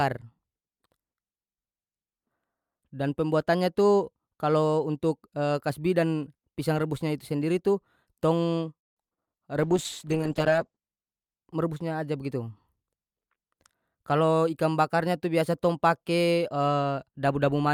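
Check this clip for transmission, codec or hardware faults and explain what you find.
Three separate transmission faults occur, all from about 8.8 s onward.

From 8.77 to 9.29 s there is repeated packet loss, giving a robotic sound. Four holes open in the stream in quick succession. The receiver bridges each by extending the last piece of sound, so about half of that half-second is concealed rather than real. The longest hole lasts 0.19 s, and some sound is lost outright. The result is a choppy, buzzy, mechanical patch with fragments missing.

Between 9.65 and 10.85 s comes a call bitrate drop. The link's bandwidth estimate collapsed, and the encoder was pushed down to a very low rate, consistent with a fall from about 48 kbps to around 9 kbps. It held at the floor for roughly 1.1 s. Coding becomes coarse, and the audio band shrinks from 20 kHz to 8 kHz, so the speech turns muffled and rough with a watery texture until quality returns.

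From 12.73 to 13.96 s there is a jitter buffer speed-up. Audio had piled up in the receive buffer beyond its target, so the receiver repeatedly trimmed short pitch-period slices to cut the delay, removing about 70 ms in total. The speech plays at 106% speed with unchanged pitch, so this stretch sounds slightly hurried and compressed in time.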